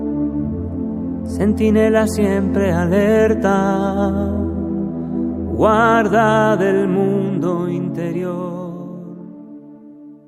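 No technical faults can be heard anywhere in the audio; the signal stays continuous and stable throughout, with no dropouts, level jumps or timing irregularities.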